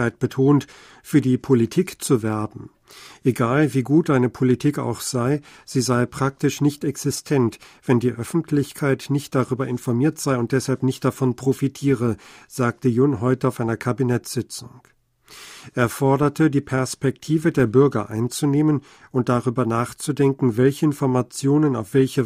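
Listening to this speech recording, nothing stood out as a technical problem anywhere in it.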